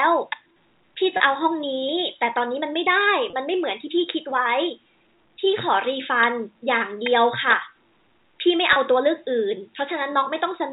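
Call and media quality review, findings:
Packet loss with pitch repetition at 1.17, 3.3 and 8.73 s. Each is a brief held, buzzy note of about 30 ms, fitting one dropped packet per gap. The receiver's concealment loops the last pitch period to cover it. Line sounds like G.711 A-law, band-limited below 4 kHz.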